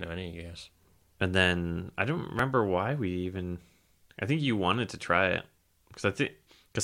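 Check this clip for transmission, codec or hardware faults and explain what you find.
The clip has one fault, which occurs twice: an overlap between stream segments. It appears at 2.39 to 2.41 s, between "then I don't" and "why we even", and again at 5.39 s, just after "you wanted to try". Two streamed chunks of the speech claimed the same stretch of time. The player dropped the shared part, though that audio was never duplicated. About 20 ms vanishes each time, and the waveform jumps across the gap. Each event is heard as a tiny skip. The chunking fits segments of about one second.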